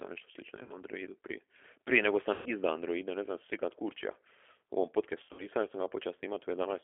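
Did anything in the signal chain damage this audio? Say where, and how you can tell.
Yes. The whole clip is speech with a rough, slightly synthetic texture and a band that stops at about 300 Hz and 3.4 kHz. The damage is plainly audible. That points to the codec stage: the G.729 codec, in its 8 kbit/s G.729A form. It doesn't carry the waveform. It models each short frame as a vocal-tract filter plus a pitch predictor and a handful of pulses, so fine detail is replaced by a coarse approximation.

There are also network faults, heard as VoIP packet loss concealed by the speech codec at three points. The first runs from 0.63 to 0.83 s, right after "nešto slično i". The second runs from 2.34 to 2.49 s. The third runs from 5.23 to 5.47 s, between "kad kurčija u ovom" and "jer sam". In each, the voice smears and fades, and stays weak briefly afterwards.

The missing audio totals 60 ms at the first point and 120 ms at each of the other two. 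At the last point the gaps are scattered over 160 ms, with the longest single gap 60 ms. That pattern fits several 20 ms packets being dropped in the network. The decoder filled each gap by extrapolating its last pitch and filter at falling gain. Because each frame builds on the one before, recovery lagged after the packets resumed.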